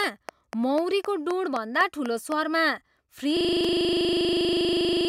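A train of clicks runs from 0.04 to 2.33 s: about ten evenly spaced pulses, nearly four per second, roughly 10 dB above the speech, likely from interference.

A system hang loop starts at 3.37 s and lasts to the end: a 40 ms piece repeats exactly, producing a steady 25 Hz buzz.

A block of digital silence at 3.64 s drops the signal to zero for 1.45 ms, which fits a 64-sample block, leaving a sharp tick.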